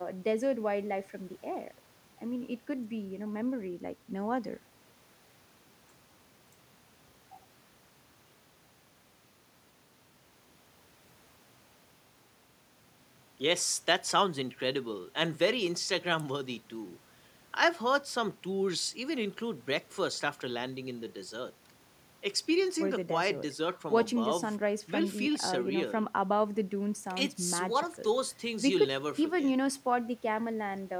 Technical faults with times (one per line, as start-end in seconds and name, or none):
none